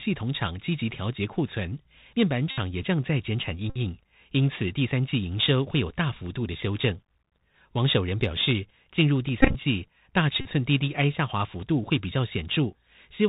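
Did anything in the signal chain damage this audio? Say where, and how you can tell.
Yes. The codec stage is damaged for the whole clip. The speech is held to a narrow telephone band with nothing above 4 kHz, and the s sounds come out scratchy over a granular hiss. That fits a Bluetooth CVSD headset codec at 64 kbit/s. CVSD codes each sample as a single up-or-down bit with an adaptive step size. When loud, high-frequency sound changes faster than the step can follow, the waveform smears into distortion, and here that damage is plainly audible.

The wireless link between headset and phone also fails in four places, each heard as a Bluetooth headset packet repeated. The first is at 2.51 to 2.58 s, the second at 3.70 to 3.77 s and the fourth at 10.41 to 10.46 s. Each is a steady buzz near 267 Hz, about 45 to 68 ms long. The buzz comes from the decoder replaying the last good packet's bits every 3.75 ms. 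At 9.41 to 9.55 s the repeats are scattered, totalling about 79 ms, with the longest run around 20 ms.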